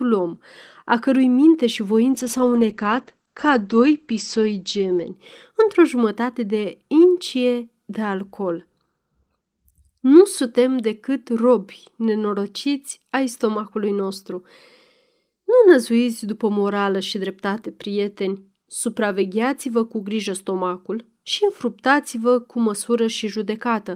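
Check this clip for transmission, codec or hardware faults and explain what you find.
One transmission fault is audible: a call bitrate drop from 2.14 s to 5.21 s, starting just after "a cărui minte și". The call's bandwidth estimate fell and the encoder was pushed from roughly 32 kbps down to about 11 kbps, staying at its lowest for about 2.9 s. With so few bits, the speech is coded coarsely and sounds rough and watery. The audio band shrinks from 20 kHz to 8 kHz, so the speech turns muffled until quality recovers.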